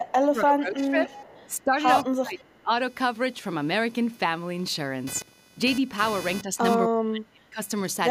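A computer activity noise runs under the whole recording: a buzzy chirp pulsing at roughly 500 Hz, about 20 dB below the speech. It follows machine load rather than the speech, which sets it apart from steady mains hum.

From 0.0 to 0.96 s the talker is pulled down by up to about 25 dB. This is speech suppressed in double talk, likely the echo canceller ducking while both sides spoke. It dips rather than cutting cleanly to silence like a dropout.

From 1.06 to 1.5 s an echo leak brings back a faint copy of the speech, 289 ms late and about 25 dB down, likely loudspeaker pickup the canceller missed. That single discrete delay distinguishes it from room reverberation.

The same double-talk suppression returns at 1.48 to 1.85 s (about 15 dB), 2.03 to 2.73 s (about 30 dB), 6.43 to 6.59 s (about 5 dB) and 6.88 to 7.6 s (about 35 dB).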